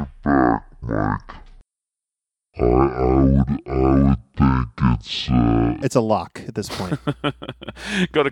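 From the start to 5.82 s the speech sounds deep, slow and dragged, with every syllable stretched and the pitch sunk by about ten semitones, before it snaps back to normal just ahead of "it's a lock at". This is a section at the wrong speed: that stretch plays at 0.503 times its original rate, so speed and pitch fall together, likely because an editor or player ran it against a clock roughly half as fast.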